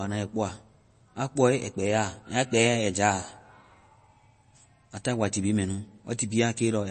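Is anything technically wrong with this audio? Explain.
Yes. Throughout the speech there is plainly audible MP3 compression, likely at a low bitrate around 32 kbps. Nothing is present above 8.3 kHz, so s sounds lose their edge. Weak frequency components switch on and off between frames, giving a watery, swirly texture and smeared consonant attacks.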